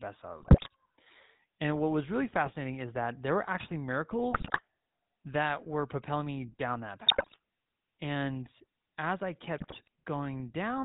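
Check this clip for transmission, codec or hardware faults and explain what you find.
Two faults show up: GSM full-rate coding across the whole speech clip, and five short bursts of GSM bit errors on top of it.

The GSM full-rate codec damage runs from start to finish and is plainly audible. The codec rebuilds the voice from a vocal-tract filter driven by a thinned-out pulse train, and nothing gets through above 4 kHz. What you hear is a dull top end and that familiar buzzy, gravelly grain on every voiced stretch. The character fits the old 13 kbps full-rate mode.

The GSM bit errors come in at 0.40–0.68 s, 2.45–2.55 s, 4.32–4.61 s, 7.06–7.36 s and 9.58–9.88 s. Corrupted bits are getting into the decoder's filter, pitch and gain parameters, so for a few frames at a time the spectrum warps or the level jumps. Each burst comes out as squawks, pops and gargling lasting roughly a tenth to a third of a second. 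The bursts at 4.32 s and 7.06 s carry the highest bit error rates, about 7.3% and 5.2%.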